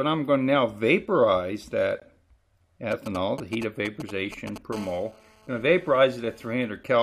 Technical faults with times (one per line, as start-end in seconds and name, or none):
2.00 gap between stream segments
2.91-4.58 GSM signalling bursts
4.73-6.52 GSM phone buzz